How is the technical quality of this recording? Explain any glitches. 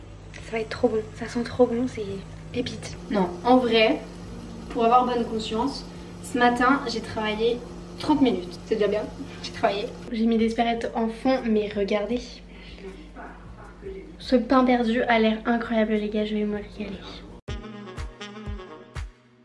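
No glitches or technical faults can be heard anywhere.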